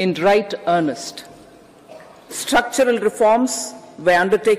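No technical faults can be heard anywhere in the audio.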